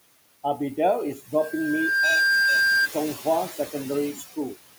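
From start to finish, noise suppressor artifacts shape the background. The suppressor lowers the bands it judges to be steady noise by about 20 dB, frame by frame, so the room noise, which sits about 14 dB below the speech, drops away in the gaps and comes back underneath each phrase. On a spectrogram the gaps show a speckled, patchy floor, and the noise band rises and falls with the speech energy.

From 1.38 s to 2.89 s a loudspeaker feedback squeal cuts in. The microphone is picking up the speaker it feeds, and at 1.6 kHz the loop gain goes above one, so that tone builds on itself. Over roughly the first 0.7 s it swells from a faint whistle into a squeal that ends up around 5 dB louder than the speech. On a spectrogram it is a single bright horizontal line at 1.6 kHz that grows brighter. The waveform's envelope climbs over the speech in the same span.

Between 4.15 s and 4.38 s the noise suppressor cuts part of the speech. 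It mistakes some of the quieter speech energy for noise and pulls it down with the background, by about 10 dB at the deepest point. In total roughly a tenth of a second is affected, and those sounds come out swallowed and faint. The spectrogram shows thinned or missing patches in the speech energy there. The waveform shows a brief dip in amplitude where the level should hold.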